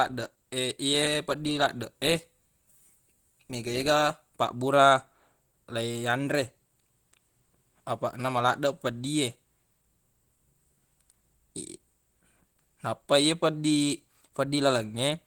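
From start to finish the speech sounds hoarse and muffled, with a rough, grainy texture on voiced sounds and noisy fizz in the upper range, although content reaches up to about 20.2 kHz. This is likely Opus compression in its hybrid mode at a low rate consistent with about 16 kbps: the speech layer is coded coarsely and the highs are filled with approximated, noise-like energy instead of the true detail.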